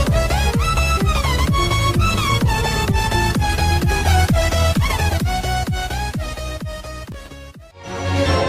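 From 1.96 s to 5.35 s the sound turns coarse and muffled, losing its top end, then clears again. This is a call bitrate drop: the bandwidth estimate fell and the encoder went from 40 kbps to 16 kbps, staying at that floor for about 3.3 s. At that rate it codes more roughly and trims high frequencies. Between 7.03 s and 7.28 s a short burst of gritty crackle rides on the audio. This is processor overload crackle: the processor repeatedly missed its audio deadlines, each time replaying a fragment of old audio with hard edges. The texture fits about ten missed buffers of around 1.5 ms each.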